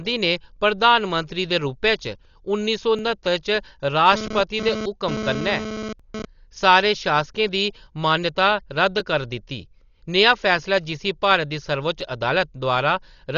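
A speech recording shows three faults. Heavy coding, likely Dolby Digital compression at a starved rate consistent with about 40 kbps, leaves the speech dull and rough throughout, with nothing above 7 kHz. Overlapping chunks at the 3-second joins replay about 7 ms of audio, heard as small stutters at 2.99, 6.00, 9.00 and 12.01 s. A nearby 2G handset in a data transfer causes GSM phone buzz: a raspy 217 Hz buzz that comes and goes from 4.13 to 6.25 s, about 7 dB below the speech.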